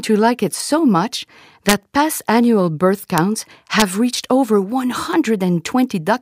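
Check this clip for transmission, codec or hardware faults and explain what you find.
Yes, there is one fault: integer overflow, heard as three violent cracks at 1.69 to 1.73 s (between "like it so much" and "past annual birth"), at 3.18 s (after "past annual birth") and at 3.80 s (before "reached over"). They are far sharper than clipping. Loud peaks went only about 0 to 2 dB past the integer limit, but instead of being held there they wrapped round to the opposite sign.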